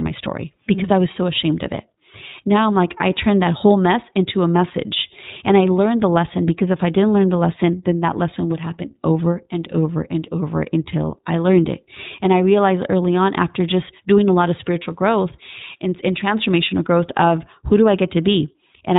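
From start to finish the speech passes through the iLBC codec, and the damage is plainly audible. Nothing above 4 kHz survives, and the voice turns rough and synthetic as each frame is coded independently. The texture fits iLBC's 20 ms mode at about 15.2 kbps.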